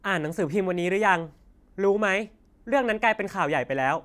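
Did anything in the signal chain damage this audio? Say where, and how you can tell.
No, nothing in the signal chain audibly damaged this speech recording; the signal arrives intact at every stage from capture to playback.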